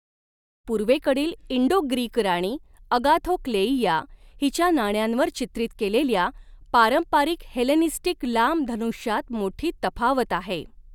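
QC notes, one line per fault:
No fault to note in the speech.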